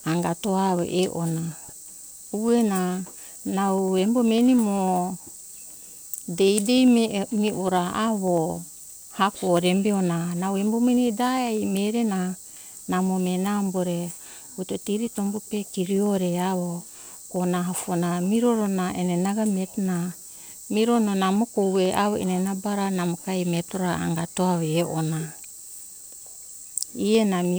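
A steady train of ticks runs through the speech from 0.09 s to 27.45 s, ten per second, heard only while signal is present. These are periodic USB or driver dropouts: every 0.1 s a blocked bus or driver skips a fraction of a millisecond of audio.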